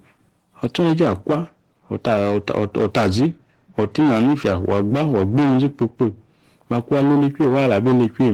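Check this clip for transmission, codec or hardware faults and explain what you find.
The clip has one fault, Opus voice compression, present throughout. The speech sounds plainly hoarse and slightly robotic, though the band still reaches about 20.2 kHz. It points to Opus in hybrid mode at a low bitrate, around 16 kbps: the linear-prediction coder handles the lower band with coarsely coded excitation, and a thin transform layer covers everything above 8 kHz.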